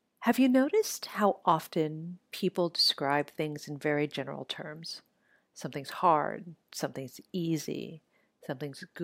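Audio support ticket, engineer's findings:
No faults found in the speech audio on inspection.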